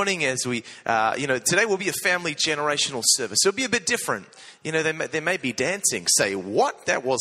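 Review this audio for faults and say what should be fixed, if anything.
No faults found here, so nothing needs fixing.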